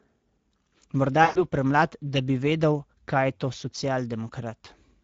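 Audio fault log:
Throughout: Speex codec. The speech is hoarse and noisy, with the damage plainly audible. Too few bits go to the excitation at this setting, which sounds like about 17 kbps. The top band above 4 kHz is only a shaped noise fill.
1.23–1.44 s: VoIP packet loss concealed by the speech codec. About 120 ms of audio, roughly six frames, is missing before "premlad da bi vedel". The decoder stretches its last pitch and filter into a sound that fades. The voice stays weak or distorted afterwards.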